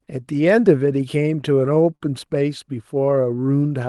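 Packets on this speech clip's call path kept arriving late, so the receiver's jitter buffer ran dry five times between 1.23 and 2.03 s, producing repeated stalls (stutter). Each time, the last sound was stretched to cover the wait, about 90 ms in total, with the longest fill about 48 ms. Nothing is lost, but that stretch drags and hiccups. The codec's top end stops near 12 kHz, consistent with an Opus call at a modest bitrate.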